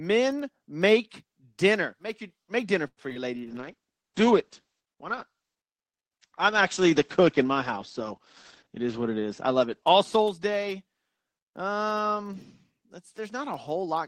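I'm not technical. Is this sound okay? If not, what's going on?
No. There are four problems, all before the last two seconds or so of the clip.

Call audio freeze: just after "your make dinner", from 2.87 to 3.00 s, the audio most likely stalled because network packets were held up. The receiver stretched the last sound, then went quiet briefly, adding a small pause without losing any speech.

Short concealed packet loss: right after "your make dinner for", at 3.10 and 3.14 s, tiny pieces of audio never arrived in time. The receiver patched each hole by guessing from the sound before it, so you hear two quick smears.

Call bitrate drop: from 3.37 to 11.77 s, the connection seemed to weaken and the call was forced to send much less data. The speech turns rough and muffled, with everything above about 8 kHz cut away, until quality returns.

Jitter buffer speed-up: from 8.66 to 10.23 s, too much delayed audio had piled up waiting to be played. 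To catch up, the receiver trimmed out about a tenth of a second in small slices, so the speech sounds slightly hurried, roughly 7% faster, without changing pitch.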